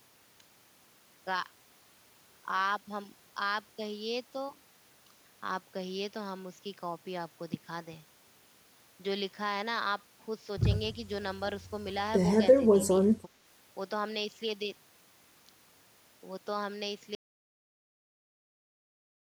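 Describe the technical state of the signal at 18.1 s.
At 18.1 s the signal is in an audio dropout to silence. It starts at 17.15 s and runs to the end of the clip. The speech stops abruptly in mid-flow. What follows is silence, with no room tone or background left. The input was likely lost, through a disconnect, a failed link or a mute, while recording carried on writing silence. Anything said during that stretch is gone.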